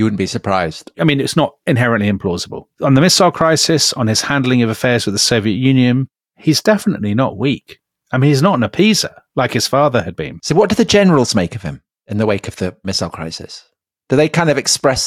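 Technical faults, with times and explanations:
The speech signal holds steady throughout, with nothing technically amiss to be heard at any point.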